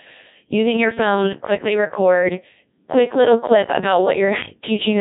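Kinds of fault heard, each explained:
Codec 2 vocoder: the speech has been through Codec 2 at 1.6 kbit/s, a low-rate digital-radio vocoder that transmits only pitch, voicing, energy and a spectral envelope rather than the waveform itself. The decoder rebuilds the voice from a set of sine waves, so what comes out is synthetic, with a robotic, buzzy character throughout the clip. The codec damage is heavy, and nothing is present above about 3.8 kHz.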